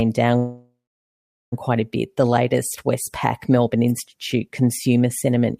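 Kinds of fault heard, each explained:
Call audio freeze: packets were likely delayed in transit and the jitter buffer ran dry, so from 0.37 to 1.54 s the speech stalls, fades and falls silent for 0.78 s, then resumes at "quite a bit" with nothing lost, now 1.15 s later.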